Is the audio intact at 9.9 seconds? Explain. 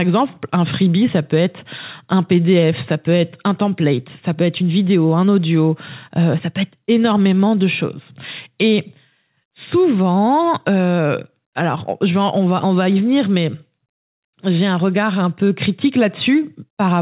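Yes, the speech is intact at 9.9 seconds, with nothing wrong at that moment beyond the ordinary narrowband sound of the call path, which carries nothing above 4 kHz.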